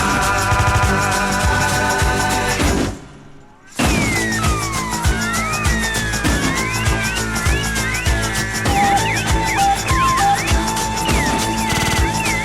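Repeated frames at 0.54 to 0.85 s and 11.72 to 11.98 s: a 78 ms block plays four extra times, then a 52 ms block five extra times, stuttering audibly and adding about 0.3 s each.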